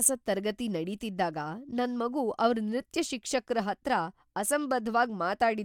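Speech recording, no technical faults detected anywhere in the clip.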